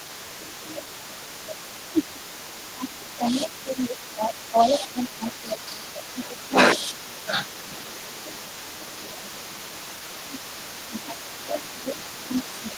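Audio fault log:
Throughout, echo leak: a delayed copy of the speech trails it by about 237 ms, sitting roughly 15 dB below the direct sound. The likely cause is a far end playing the call over a loudspeaker whose echo canceller let part of the microphone pickup slip back. On a spectrogram each syllable's harmonic pattern reappears faintly about a quarter second later. On the waveform, low-level tails fill the gaps after words instead of dropping to silence.
0.00–0.27 s, 1.92–8.37 s, 8.83–9.29 s and 10.16 s to the end, speech suppressed in double talk: the speech repeatedly dips, by around 10 dB at the start, about 15 dB across the long middle stretch (roughly four seconds of it affected) and in the final stretch, and up to about 20 dB near 9 s. Likely cause: both sides talking at once, so the echo canceller turned down the near talker along with the echo. The waveform envelope shows abrupt pinches and gaps, and the spectrogram shows energy thinning or vanishing in patches.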